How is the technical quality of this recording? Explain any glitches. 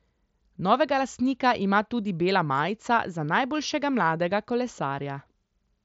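No audible glitches or faults.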